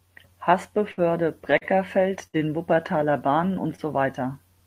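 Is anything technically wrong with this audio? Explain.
Yes, the speech has several packet-delivery faults.

Burst of packet loss at 0.91–1.00 s and 2.27–2.36 s: consecutive packets never arrived in time, so the receiver held the last sound for about 60 ms and faded it. This gives a brief buzzy or hissy smear, then speech resumes with about 60 ms skipped each time.

Short stall from a late packet at 1.58–1.64 s and 3.76–3.81 s: a packet was late and the jitter buffer ran dry, so the receiver stretched the preceding sound by 35 ms and then 22 ms. Nothing is lost, but a sound lingers with a faint buzz or dip.

Jitter buffer slow-down at 2.38–2.75 s: right after the second loss, the receiver rebuilt its reserve by repeating pitch periods, adding 44 ms. Speech there plays at about 90% speed without any pitch change, sounding drawn out.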